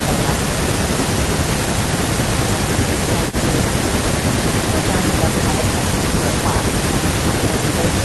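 Speech recording with no audible technical faults anywhere in it.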